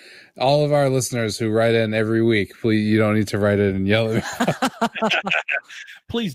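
After "write it in yellow", at 4.38 s, a call bitrate drop sets in to the end: the speech turns coarse and rough, consistent with the encoder falling from roughly 64 to 17 kbps.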